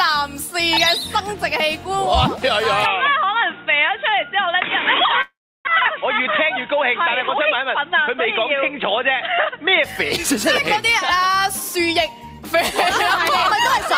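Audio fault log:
2.86–9.84 s, input switched to a poorer device: the sound abruptly turns dull and boxy with nothing above 3.8 kHz, no gap at the change and little level shift, plus a faint new noise floor. This is likely a change to a narrowband microphone.
5.21–5.69 s, long network dropout: the last sound smears into a fading buzz, then about 0.33 s of silence, and resumes with roughly 0.4 s missing and timing shifted by around 40 ms, likely from packets that never arrived.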